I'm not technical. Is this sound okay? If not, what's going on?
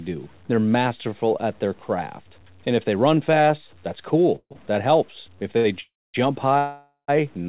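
No. Low bit depth without dither runs through the whole clip: quiet parts of the speech sound gritty and grainy, most likely because the audio was stored with too few steps and simply chopped to fit.

Call audio freezes happen at 4.36 to 4.53 s, right after "they run fast that's", at 5.80 to 6.16 s and at 6.58 to 7.10 s. The sound turns into a fading buzz or brief silence, then resumes where it stopped. The likely cause is that parts of the call were held up in transit and the receiver ran out of audio to play.

Short stalls from a late packet occur at 4.53 s and 5.57 s. A sound is briefly held too long while a late piece arrives, and then the speech carries on.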